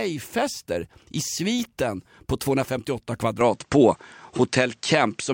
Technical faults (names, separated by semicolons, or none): input switched to a poorer device